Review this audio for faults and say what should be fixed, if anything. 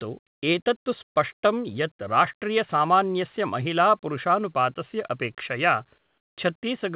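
From 5.98 to 6.36 s the real background drops out for a flat, featureless hiss about 7 dB quieter. That's likely comfort noise in place of the background: the sender's voice detector heard no speech and stopped sending, so the receiver filled the gap with synthetic noise. Turning off discontinuous transmission on the sender would keep the real room sound running through pauses.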